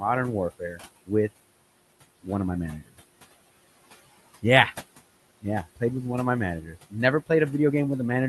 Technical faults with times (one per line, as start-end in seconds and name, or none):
0.00-8.29 noise suppressor artifacts
0.50-0.81 speech cut by the noise suppressor
6.62-6.94 speech cut by the noise suppressor